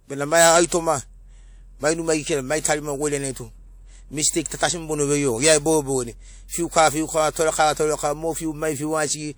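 Pre-echo shows up four times: at 0.66 s after "bena mai", 3.32 s, 6.48 s before "fiukava fiukava", and 7.31 s before "torekava mo". Each is a 36 to 51 ms hiss ahead of a sharp attack, where codec noise sized for the loud onset smears into the quiet gap before it.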